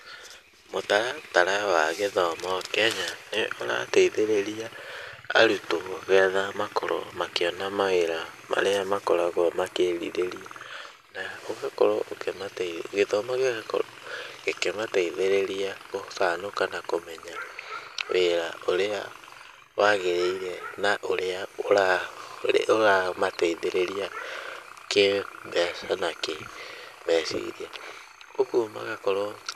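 Nothing technically wrong turns up anywhere in this speech recording, so there are no problem spots to point to and nothing to track down.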